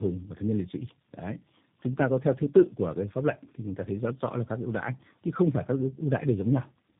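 Throughout, the speech sounds rough, muffled and warbly, with nothing above 3.7 kHz. This is tandem speech coding: three speech codecs in a row, each re-coding the previous codec's damage.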